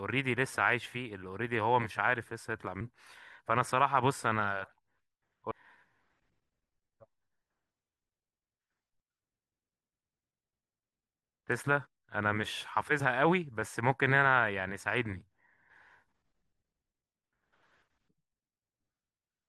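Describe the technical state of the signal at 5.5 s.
At 5.50 s there is damaged data in a compressed stream. It lasts only about 12 ms. Corrupted bytes there make the decoder misread its frames and lose sync until it finds the next frame header. The result is a brief glitch in the speech.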